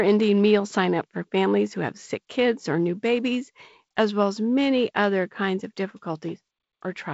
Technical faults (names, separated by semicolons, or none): none